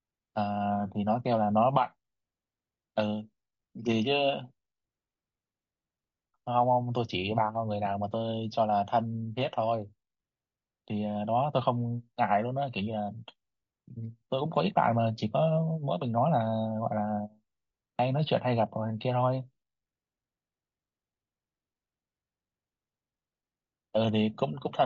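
From start to finish the speech has a rough, grainy texture, the mark of low-delay AAC compression, likely AAC-ELD at a rate that fits about 32 kbps. At this low bitrate the coder cannot spend enough bits to code the pitch harmonics cleanly, so noise fills the gaps between them and the damage is plainly audible. On a spectrogram the harmonic stripes look smeared, with speckled energy between them and a thin, patchy top band. The waveform alone shows little of it.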